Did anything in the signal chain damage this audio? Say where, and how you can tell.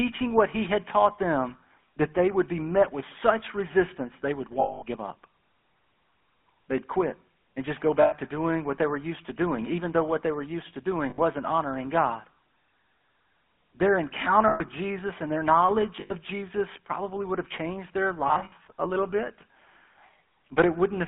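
Yes. The codec stage damaged it throughout. The speech carries the buzzy, gravelly roughness of the GSM full-rate codec, and nothing is heard above about 3.4 kHz or below about 200 Hz. That roughness comes from a vocal-tract model fed by a sparse, regularly spaced pulse train. Fine detail in the excitation is discarded, so the voice sounds coarse and thin. The damage is plainly audible, which fits a 13 kbps mobile call.

The network stage also dropped GSM frames at six points. At 4.6 s, about 220 ms is lost. At 8.02 s, between "quit and just go" and "to doing what they", 100 ms goes. At 11.1 s, after "they were used to", 80 ms is lost. Then 120 ms goes at 14.48 s, and 100 ms at 16.0 s after "and their knowledge". At 18.28 s the losses are scattered over about 240 ms. Each gap holds a rough, metallic ring. The decoder repeats the last good frame at a falling level.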